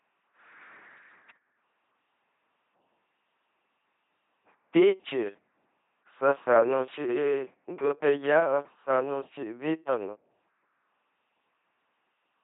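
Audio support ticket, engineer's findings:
Speech buzzy, mechanical, robotic throughout; heavy damage. LPC-10 vocoder at 2.4 kbit/s. Each frame drives a ten-pole vocal-tract filter with either a pulse train or noise, never a mix. Spectrogram: rigid, evenly spaced harmonic stripes or flat noise blocks, smeared formants, hard ceiling at 3.8 kHz. Waveform: regular, spiky pulse shapes.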